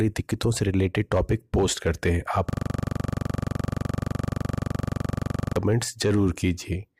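At 2.50 s a system hang loop begins and runs until 5.56 s. The system froze while the audio hardware kept replaying its buffer. One 42.67 ms slice repeats exactly, which fits a 2048-sample buffer. It sounds like a rapid 23.4 Hz rattling buzz.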